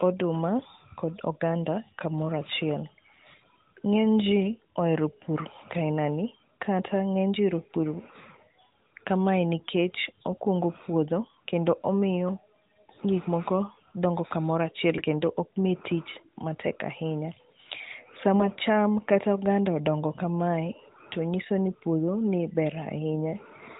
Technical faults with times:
14.98-15.05 AMR bit errors

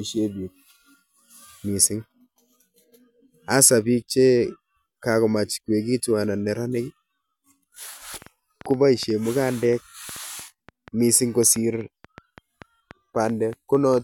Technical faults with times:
8.14-13.99 train of clicks

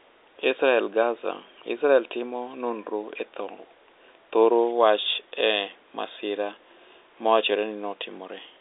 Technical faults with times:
none

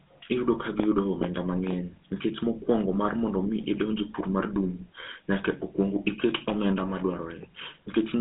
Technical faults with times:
0.00-8.20 GSM full-rate codec

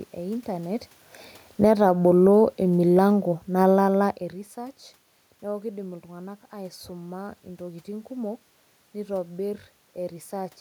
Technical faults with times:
1.49-1.86 automatic gain falling
1.78-2.66 automatic gain rising
2.61-4.19 automatic gain falling

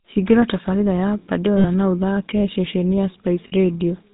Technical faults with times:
0.00-4.13 GSM full-rate codec
1.58-1.65 lost GSM frames
3.48-3.53 lost GSM frames

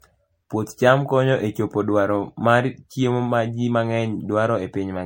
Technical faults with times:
0.00-5.05 generation loss

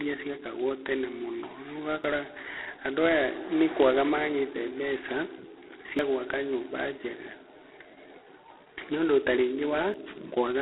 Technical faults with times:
0.00-10.61 G.726 ADPCM
2.04 audio missing between chunks
5.99 audio missing between chunks
9.94 audio missing between chunks

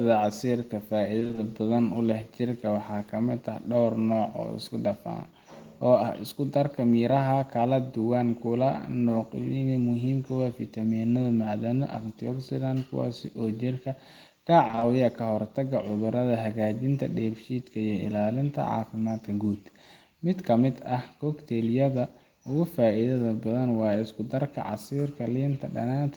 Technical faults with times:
1.19-1.39 repeated packet loss (robotic sound)
14.67-14.83 repeated packet loss (robotic sound)

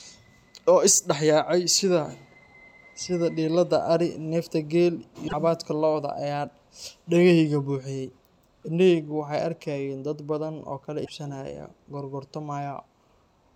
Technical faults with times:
5.27-5.33 broken MP3 bit reservoir
11.04-11.10 broken MP3 bit reservoir

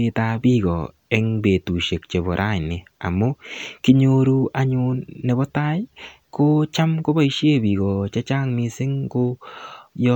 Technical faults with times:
none

